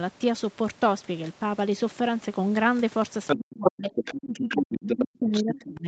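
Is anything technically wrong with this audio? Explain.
Yes, there are two related faults in the second half of this speech clip.

A second voice, the other side's voice leaking through, appears at 3.27–3.7 s, 3.95–4.62 s, 4.89–5.04 s and 5.32–5.68 s. It starts at roughly the main talker's level, then drops to a little below and finally well below. The likely cause is loudspeaker playback that the echo canceller failed to fully remove from the microphone. It differs from reverberation because it is a separate talker, not a smeared tail of the main voice.

Speech suppressed in double talk runs from 3.35 s to the end. The main voice drops in and out, at worst by roughly 30 dB, for about two seconds in total. The canceller likely turned down everything while both sides spoke. This is a loss of the main voice, not an added sound, which distinguishes it from the leakage.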